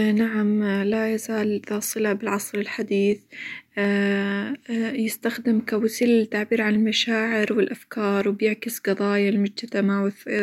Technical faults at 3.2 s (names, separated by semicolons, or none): clock drift buffer slips